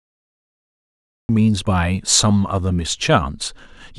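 The clip opens with digital silence from 0 to 1.29 s. At 1.29 s the speech appears abruptly, already in mid-sound. This is a cut-off start. The recording or stream began late, so the first part of the sound was never captured. There is no natural onset and no fade-in. The level jumps from nothing straight to full speech. The opening syllable sounds clipped off at its front edge.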